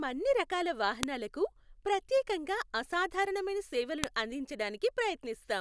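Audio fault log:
1.03 s and 4.04 s: file header played as audio. At each point a sharp, loud click snaps through the speech, marking where a new piece of the recording begins. The pieces were joined or streamed with their WAV headers left in, so the few dozen bytes of header data are read as sample values. Those values bear no relation to the waveform around them, so the jump lands abruptly regardless of what the speech is doing at that instant.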